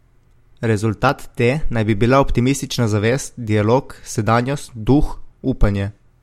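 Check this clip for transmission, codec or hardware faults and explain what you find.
One hardware-side fault shows up, periodic USB or driver dropouts. From 0.07 s to 5.17 s, small regular ticks land every 1.02 s, about seven in all, as roughly half a millisecond of speech is skipped each time a background task stalls the USB bus or audio driver.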